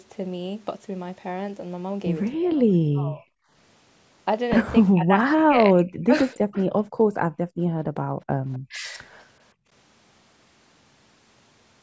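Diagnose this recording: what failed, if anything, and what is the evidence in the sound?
The speech dips sharply at 2.35–3.29 s, 4.81–6.58 s and 8.70–9.03 s, by up to roughly 40 dB, then recovers. This is likely speech suppressed in double talk: the call's echo canceller could not separate the talker from loudspeaker echo and turned both down. Unlike a network dropout, the level is attenuated rather than replaced by silence or concealment.

An echo leak shows as a faint, delayed copy of the sound at 6.34 s and 8.53–8.59 s, arriving 250 ms late and about 30 dB below the speech. This is probably a loudspeaker at one end reaching its microphone, with the echo canceller failing to remove it. The fixed 250 ms delay separates it from room reverberation, which decays smoothly instead of repeating.

The background is gated by the echo canceller. The room sound falls by about 40 dB between 6.86 and 8.42 s, and by about 25 dB at 9.54–9.68 s, then returns. 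The call processing clamped the microphone while the loudspeaker played. Unlike double-talk suppression, the background drops out here, not the speech. The spectrum stops at 8 kHz, consistent with the call path.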